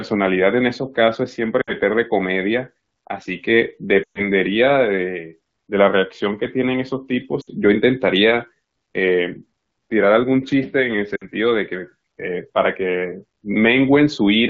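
Speech over an AMR wideband link, with lost AMR speech frames at 1.62–1.73, 4.03–4.21, 7.41–7.49 and 11.15–11.25 s. The decoder repeats its last good pitch and vocal tract settings with falling gain, so the speech smears and fades. Gaps of about 60 ms suggest three 20 ms frames; the 120 ms gap at 4.03 s spans six frames before recovering.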